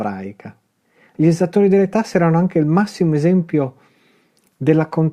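No technical faults are audible.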